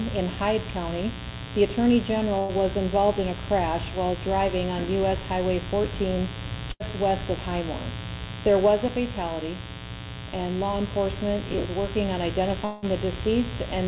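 Mains buzz runs through the whole clip: a steady, raspy 60 Hz buzz at roughly 10 dB below the sound. Sharp switching spikes, twice per mains cycle, leaked into the signal, and their stacked harmonics reach up to the 4 kHz ceiling of the narrowband call path.

A burst of packet loss hits at 2.39 to 2.56 s and again at 6.71 to 6.83 s. Each time about 90 ms never arrived. The receiver stretched the last sound for roughly 90 ms as a fading buzz or hiss, then resumed with that stretch gone.

A long network dropout is the likely cause of the break at 12.65 to 12.85 s. About 180 ms of audio is missing, and for roughly 170 ms the last sound is carried on as a decaying buzz or hiss. It never falls to silence before the audio returns further along.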